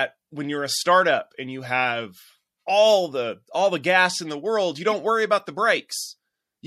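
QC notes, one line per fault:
Throughout, MP3 compression: the speech has a plainly audible watery, swirly quality, with sibilants turning metallic and consonant attacks smeared, which fits a 64 kbps encode that likely starved the encoder of bits. Short on bits, it drops weak spectral lines that flicker on and off between frames. On a spectrogram that shows as patchy, blinking holes in the upper harmonics.
4.91 s, corrupt frame decoded: between "in the world you" and "worry about the" a brief glitch cuts across the speech, peaking at about -20 dBFS. Damaged bits in a few compressed frames, roughly three, were decoded anyway, so misread gains and codes put energy at the wrong frequencies for the length of those frames. A spectrogram shows a narrow vertical smear of misplaced energy lasting about 20 ms, and the waveform shows a spike that doesn't follow the surrounding envelope.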